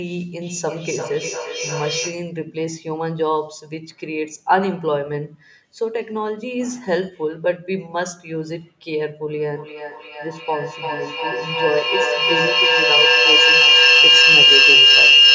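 From 0.41 to 2.3 s the speech comes back at you in thin, ringing repeats about a third of a second apart, the loudest only about 4 dB under the speech itself. This is feedback echo between two devices. Two devices in the same room are on one call, and one is playing out what the other's microphone sent. That microphone hears it again, and neither device's echo canceller removes sound played by the other, so each phrase circles back at roughly 300 ms.

At 9.46 s the same loop takes over. The repeats swell rather than fade and narrow to a piercing tone around 3 kHz, pulsing at about the same 300 ms rhythm and peaking about 11 dB above the speech. This is feedback howl. Each trip from loudspeaker to microphone and back adds level, and the frequencies the loop favours win out. Nothing breaks the loop, so the howl runs to the end of the clip at 15.34 s. The call's microphone processing passes nothing above 8 kHz, and the howl sits well inside that band.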